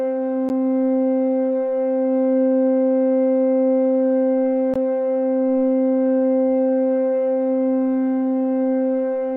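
At 0.49 s and again at 4.74 s the sound drops out briefly, for about 10 ms and 18 ms, then resumes where it stopped: a gap at a join of encoded pieces. Separately encoded segments were spliced untrimmed, leaving encoder delay and final-frame padding as silence.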